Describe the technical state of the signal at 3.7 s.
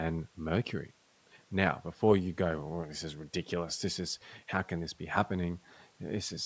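At 3.7 s the speech signal is intact, with no dropout, distortion or other fault, only the ordinary band-limiting of call microphone processing, whose trimmed low bass and lack of content above 8 kHz are normal for that path.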